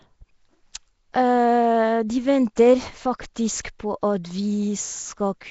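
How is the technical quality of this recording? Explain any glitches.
The recording is clearly degraded by coding damage throughout, with one brief smeared attack.

Across the whole clip the speech has a rough, hissy halo and a watery, underwater blur. Nothing is heard above about 7.7 kHz. This is likely Nellymoser compression, the old Flash microphone codec, and the level of damage fits a rate near 32 kbps. It codes short blocks with very few bits. Quiet bands get no real detail and are filled with noise, which gives the hiss and smear.

At 2.56 s there is pre-echo. A hiss runs ahead of a sharp onset for about 13 ms, and the attack itself sounds softened. The codec spreads its error evenly across a block. A loud attack late in that block sets a high noise level, and that noise also fills the quiet instant just before it.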